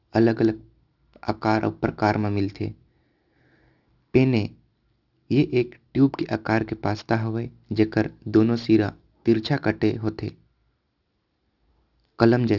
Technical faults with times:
0.00-12.59 aliasing

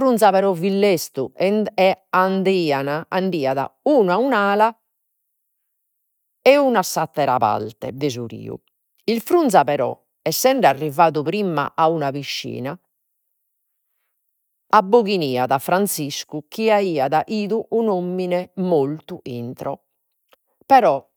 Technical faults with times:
none

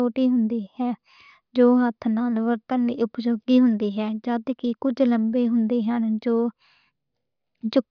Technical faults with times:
none

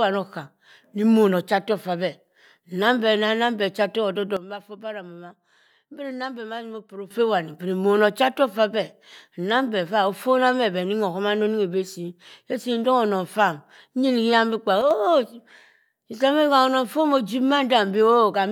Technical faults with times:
4.37-7.11 sudden gain jump
14.81-14.91 sudden gain jump

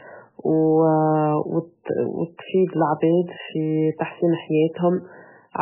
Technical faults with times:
0.00-5.62 MP3 compression

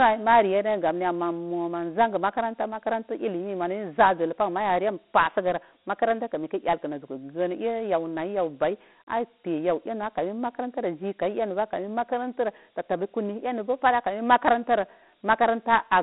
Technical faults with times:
0.00-16.02 Dialogic VOX ADPCM

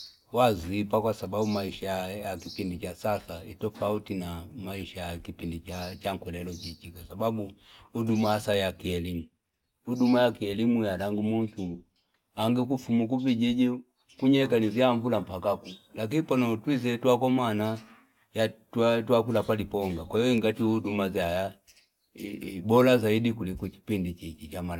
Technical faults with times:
none

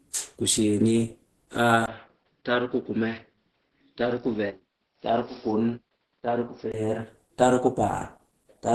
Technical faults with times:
0.00-8.74 Opus compression
1.86-6.74 input switched to a poorer device

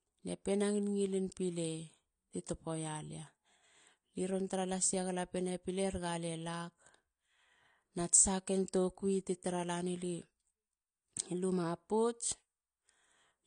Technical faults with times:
0.00-13.46 AAC compression

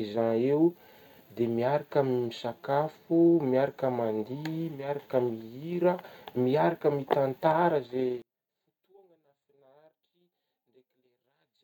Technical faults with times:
8.22-11.64 one channel inverted

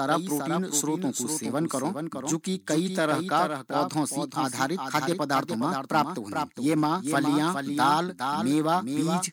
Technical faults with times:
0.00-9.32 doubled audio track

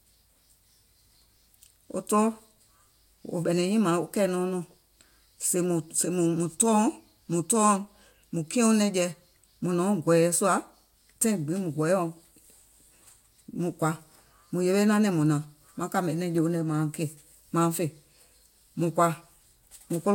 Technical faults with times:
none

